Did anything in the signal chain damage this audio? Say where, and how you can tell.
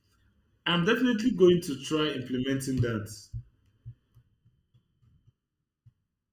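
Yes. There is channel delay (comb filtering) throughout the speech. One channel of the stereo pair arrives under a millisecond behind the other, and the two are then summed to mono at a mixdown or playback stage. The shared content cancels at fixed, evenly spaced frequencies, starting around 700 Hz and recurring roughly every 1.4 kHz above that. The result is a hollow, phasey sound that stays the same for the whole clip.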